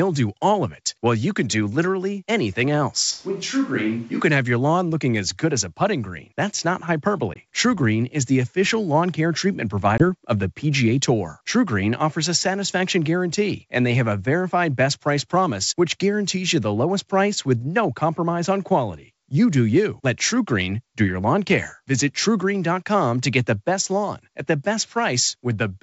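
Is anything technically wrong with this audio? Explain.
Yes. From 3.13 to 4.20 s the close microphone's signal likely drops out and a distant microphone takes over, so the speech turns abruptly hollow and roomy, about 5 dB quieter, with room noise sitting about 30 dB below it.

At 7.34 to 7.37 s and again at 9.98 to 10.04 s, packet loss on an ADPCM call leaves a hard-edged 20 ms silence, which suggests about one packet lost each time. The decoder's predictor and step size then disagree with the sender's, so the speech resumes slightly distorted before settling.

Throughout, the G.722 wideband telephone coding carries the speech clearly up to about 7 kHz, with only a faint upper-band hiss.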